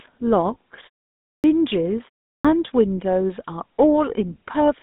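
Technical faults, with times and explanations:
Throughout, GSM full-rate codec: the speech is coded by modelling the vocal tract and exciting it with a sparse, regularly spaced pulse train, which lends it a buzzy, gravelly grain. The band is limited to roughly 200 Hz to 3.7 kHz, nothing above 3.8 kHz, consistent with a 13 kbps GSM full-rate coder.
1.37 s and 2.38 s, clipped start after a pause: after silences of 0.56 s and 0.37 s, the output path was slow to wake, so about 69 ms and 66 ms at each onset are missing. The speech bursts in abruptly without its initial sounds.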